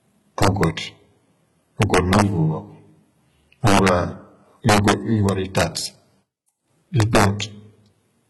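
Throughout the speech the treble sounds gritty and metallic, s sounds turn lispy, and nothing reaches above 11.8 kHz. This is heavy damage, likely from HE-AAC compression at a very low bitrate, around 16 kbps, where the upper band is copied up from lower frequencies rather than coded.

Violent, sharp cracks hit the loud passages at 0.43 to 0.64 s, 1.82 to 2.22 s, 3.67 to 3.89 s, 4.69 to 4.92 s, 5.29 to 5.63 s and 7.00 to 7.24 s. This is integer overflow: peaks driven about 2 to 4 dB past the limit wrap to the opposite sign instead of being clipped.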